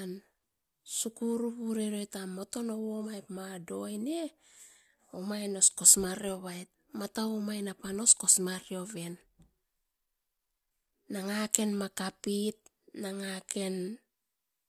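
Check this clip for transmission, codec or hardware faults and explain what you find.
Nothing stood out on listening to this speech recording that would point to a transmission, codec or hardware problem.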